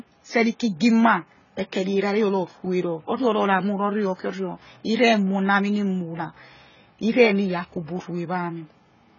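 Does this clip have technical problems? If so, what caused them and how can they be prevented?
Yes. Throughout the speech there is heavy AAC compression damage: nothing is present above 7 kHz, and the sound is dull and smeared, with a warbling or fizzy texture on sustained sounds and sibilants. The likely cause is low-bitrate AAC-LC encoding, which fits a rate around 16 kbps. The encoder quantises each frame's frequency lines coarsely, lowers the cut-off, and either leaves gaps in the spectrum or fills bands with substitute noise. To prevent it, record and deliver at a higher bitrate or in a lossless format.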